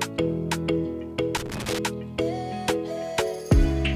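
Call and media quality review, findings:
Loose connector crackle, 1.37 to 1.79 s. Irregular burst of crackle and scratching. Probable component: worn or dirty contact in the cable or jack. Contact makes and breaks rapidly, chopping the signal. Any DC on the line adds pops.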